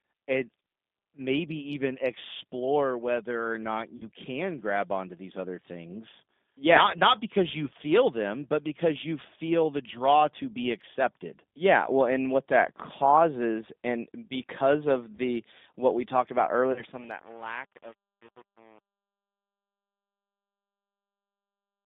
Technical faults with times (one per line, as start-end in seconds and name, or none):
0.00-21.85 G.729 codec
3.97-4.07 VoIP packet loss concealed by the speech codec
7.65-7.69 VoIP packet loss concealed by the speech codec
15.16-15.20 VoIP packet loss concealed by the speech codec
16.55-21.85 truncation distortion on a fade
16.72-16.84 VoIP packet loss concealed by the speech codec